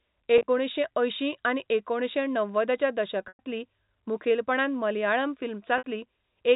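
Speech carried over a G.711 telephone link, so the sound is band-limited below 4 kHz. Packet loss with pitch repetition occurs three times. Packets went missing and the receiver covered the gaps by repeating the last pitch period. At 0.38 to 0.48 s, about 70 ms dropped in short bursts of at most 30 ms, heard as a held, buzzy note. At 3.28 to 3.39 s, 110 ms vanished and the repeated tone fades before speech cross-fades back. At 5.78 to 5.83 s, roughly 60 ms gives another brief buzzy hold.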